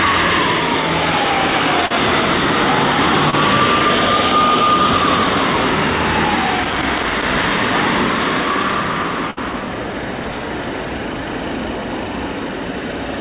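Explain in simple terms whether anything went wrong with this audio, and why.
Several things went wrong, and they fall into three kinds.

At 1.86 to 1.92 s and again at 3.30 to 3.35 s there is short concealed packet loss. A few hundredths of a second of audio failed to arrive over the call in time. The receiver covered each hole by stretching out the sound just before it, so you hear a quick smear or tiny wobble rather than silence. It's brief, smooth and sits inside the flow of the sound, which separates it from the crackle described below.

At 9.31 to 9.39 s there is a burst of packet loss, a longer version of the same problem. About 60 ms went missing in a row. The receiver again kept the previous sound going and let it fade as the gap dragged on, so you hear a held buzz or fading hiss, and then the audio picks up a little further along with that slice simply gone. Unlike the short drops, it is a clear skip, not just a smear.

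From 6.63 to 7.43 s and from 10.20 to 10.42 s there is loose connector crackle. A worn or dirty plug contact kept connecting and disconnecting, chopping the signal into rough, irregular scratching. It sounds harsh and random and lasts much longer than the drops, and it doesn't continue the sound the way the call's gap-filling does.

The call itself carries no sound above 4 kHz, which gives the muffled, telephone-like tone heard throughout.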